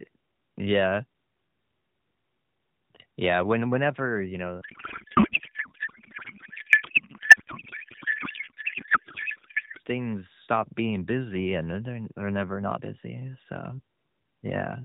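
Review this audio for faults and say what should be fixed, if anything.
From 4.62 to 9.80 s, between "when whenever you" and "things stop being busy", there's a codec payload misread. Octet-aligned AMR frames get decoded as bandwidth-efficient, so the speech turns to garbled warble. Make sure both ends agree on one AMR payload format when the call is set up.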